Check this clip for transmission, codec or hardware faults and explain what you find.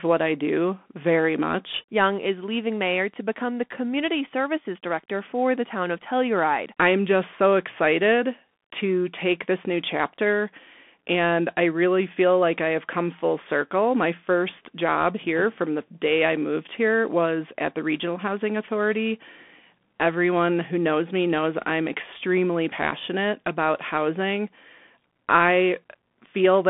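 One fault runs through the whole recording: the speech has passed through a Bluetooth CVSD headset codec. The band is confined to roughly 200 Hz to 3.5 kHz, with nothing above 3.8 kHz. A one-bit-per-sample, adaptive-step coder, consistent with CVSD's 64 kbit/s stream, cannot track fast, loud high content, so sibilants turn scratchy, peaks distort, and a granular hiss sits under the speech.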